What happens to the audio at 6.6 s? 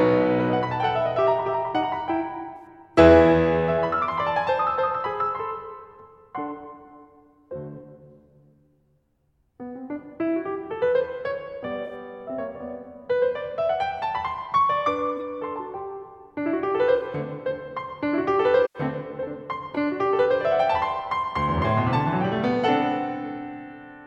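Nothing goes wrong at 6.6 s; the music plays through that point intact, with no dropout, click or other fault.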